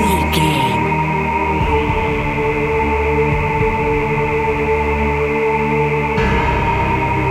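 From start to end, a DECT cordless phone buzz sits under the audio. A nearby DECT handset or base sends radio bursts 100 times a second. The audio circuit rectifies them. The result is a thin, steady 100 Hz buzz with many harmonics, well below the main sound.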